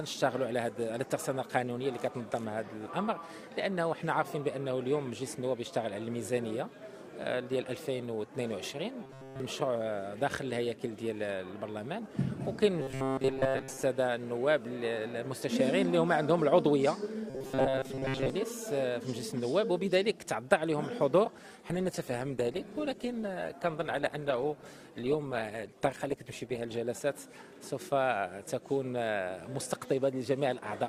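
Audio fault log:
9.03–9.40 s, 12.81–13.83 s, 17.30–18.30 s: robotic sound from repeated short buffers. The audio turns into a rigid, metallic buzz pitched at 133 Hz that loosely tracks the underlying sound. In the first burst nearly all of it is buzz; in the later two most of it is. The likely cause is audio arriving too seldom, so the player loops a fragment of about 7.5 ms, one period of 133 Hz, while the real audio is skipped.
21.70–26.89 s: call bitrate drop. The sound turns rough, watery and muffled, losing its top end, then clears at the end of the span. The encoder's bitrate fell from 96 kbps to 16 kbps and stayed at that floor for about 5.1 s. At so few bits the codec quantises coarsely, smearing detail into a watery texture, and discards the high frequencies, which dulls the sound until the rate recovers.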